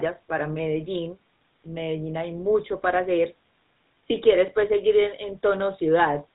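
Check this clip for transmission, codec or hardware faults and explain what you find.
One codec fault runs through the whole clip. GSM full-rate codec damage is present from start to finish: the speech has been squeezed through a vocal-tract model driven by a regular pulse train, with only a third of the excitation samples kept, a coarseness that fits the 13 kbps first-generation GSM coder. Nothing survives above 4 kHz, so the voice sounds dull and band-limited, and the thinned excitation gives it a plainly audible buzzy, gravelly roughness.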